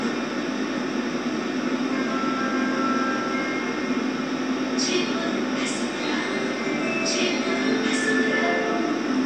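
No technical faults can be heard in this audio.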